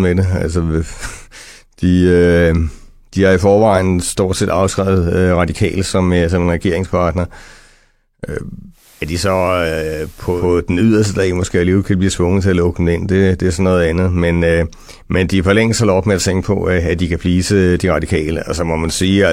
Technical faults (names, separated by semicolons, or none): digital radio blending to analogue